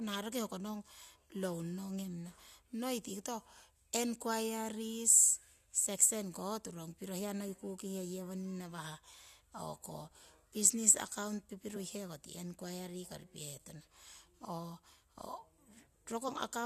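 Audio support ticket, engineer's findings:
Damaged data in compressed stream, two hits in speech. Corrupted bytes in the encoded stream; decoder misreads the affected frames, loses frame sync, then rescans for the next valid header. Audible as a brief glitch in the speech. First at 3.09 s, about 14 ms. Second 16.28–16.30 s, about 20 ms, near the clip end. Probable component: transport or storage of the compressed file, not the decoder itself.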